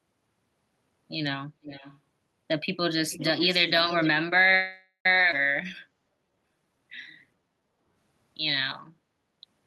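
From 1.62 to 1.99 s, and again from 3.09 to 4.09 s, an echo leak adds a faint second copy of the speech trailing the original by 425 ms. It sits about 20 dB below the direct speech in the first stretch and about 15 dB below in the longer second one. The likely cause is a far-end loudspeaker whose echo canceller did not fully remove what its microphone picked up, so that sound was returned. On a spectrogram the harmonic and formant patterns reappear as weaker, shifted replicas 425 ms later. In the waveform, low-level energy fills gaps where the direct speech pauses.

At 4.55 s a call audio freeze holds the sound for about half a second, until 5.06 s. The last syllable is stretched into a fading buzzy tail, and the final 80 ms is silent before speech resumes exactly where it stopped. Nothing is lost, but the stream now runs about half a second late. This is likely due to packets being held up until the jitter buffer ran empty. 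A spectrogram shows flat, smeared horizontal bands that fade to blank, then a clean restart.

At 5.31 s a skip ahead cuts out about a fifth of a second of speech. The material on either side is spliced with only a tiny bridging gap, so the sound lurches forward abruptly. Late audio was already queued, and part of it was discarded to recover delay. The waveform shows an abrupt join with a discontinuity in envelope, and the spectrogram shows formant tracks that jump instead of gliding.

From 5.89 to 6.85 s and from 7.31 to 7.93 s, jitter buffer slow-down makes the speech run at 86% speed with unchanged pitch. This adds 143 ms and 95 ms respectively while the buffer rebuilds its reserve by repeating single pitch periods. Vowels sound drawn out. On a spectrogram, steady segments are elongated, and the waveform shows identical consecutive pitch cycles.

From 8.94 to 9.13 s, the background is gated by the echo canceller. 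The room noise dips for roughly 150 ms, by about 8 dB at its deepest, and then recovers. On the spectrogram the noise floor visibly thins across all frequencies for that span, and the waveform's low-level baseline narrows briefly.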